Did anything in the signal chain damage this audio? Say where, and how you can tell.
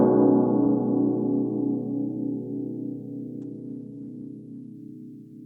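Yes. A call bitrate drop hits the codec stage from 3.43 s to 4.81 s. The music turns coarse and dull as the top end narrows from 20 kHz to 12 kHz. A falling bandwidth estimate cut the encoder from 128 to 25 kbps for 1.31 s.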